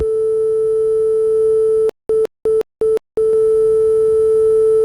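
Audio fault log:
1.89 to 3.33 s, stutter with silent gaps: the same 160 ms burst comes back four times, each followed by about 200 ms of dead digital silence, so it ticks along every 360 ms. That's likely a stalled stream replaying its last fragment, and the audio meant for that stretch is gone.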